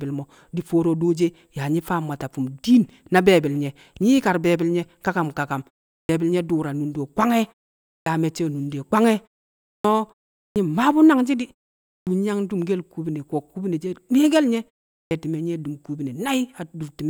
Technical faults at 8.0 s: clipped start after a pause

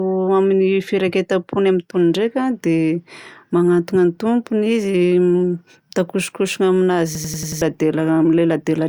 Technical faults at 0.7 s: none

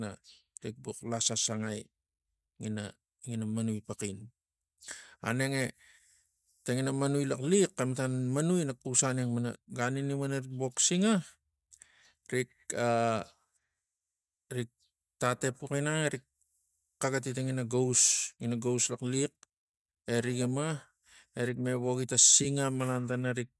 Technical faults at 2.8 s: none

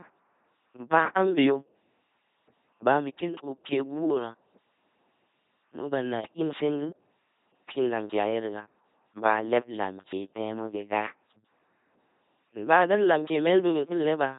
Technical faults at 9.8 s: LPC-10 vocoder

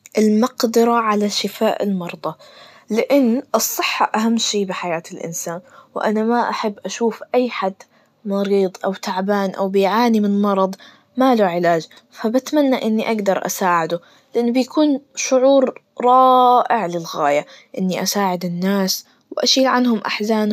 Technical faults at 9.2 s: none

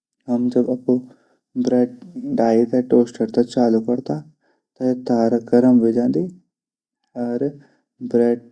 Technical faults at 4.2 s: none

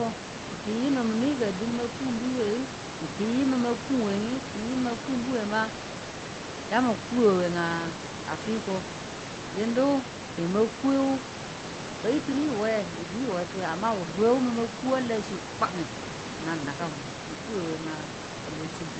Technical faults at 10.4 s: none

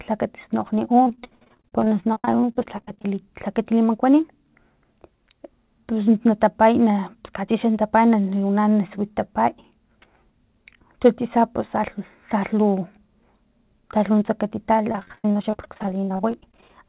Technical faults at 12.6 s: none

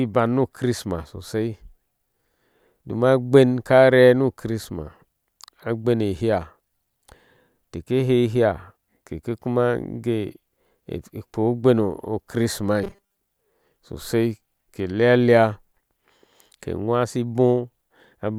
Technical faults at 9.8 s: none

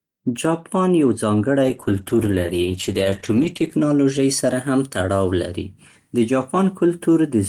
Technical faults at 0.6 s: none

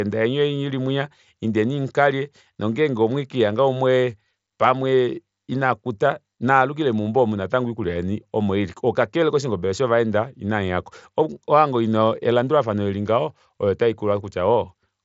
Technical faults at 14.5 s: none

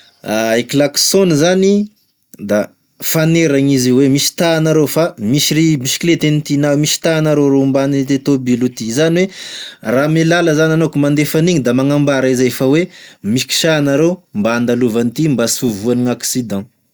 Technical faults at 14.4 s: none

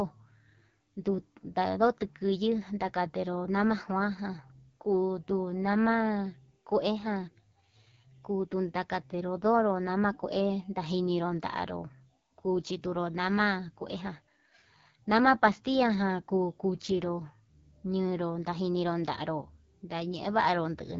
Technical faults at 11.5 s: AMR wideband (HD Voice) codec

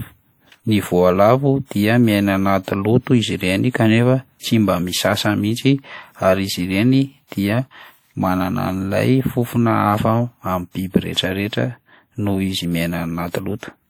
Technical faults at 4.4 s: WMA compression; pre-echo

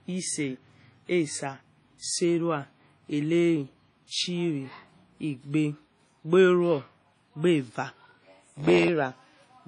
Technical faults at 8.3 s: WMA compression; block size mismatch (padded)

